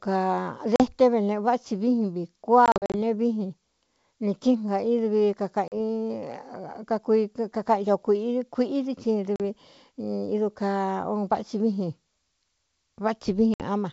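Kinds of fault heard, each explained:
Packet loss on an ADPCM call: lost packets leave hard-edged silent holes, then speech returns slightly distorted while the decoder's predictor resynchronises, including a scattered burst around 2.7 to 3.0 s.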